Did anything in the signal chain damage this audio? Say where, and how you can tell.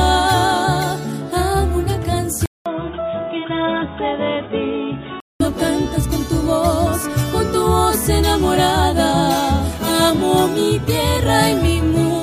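Yes. At the input stage, the recording likely switched to a poorer device from 2.46 to 5.40 s. After a 200 ms gap, nothing passes above 3.8 kHz, the level falls roughly 5 dB and new noise appears, so the sound turns dull and boxy until it clears.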